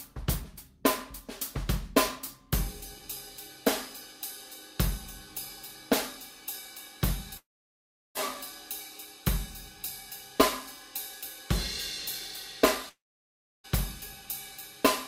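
A long network dropout, likely, cuts off the stream at 7.37–8.17 s and 12.89–13.66 s: the last sound fades to silence, then returns with roughly 0.78 s missing.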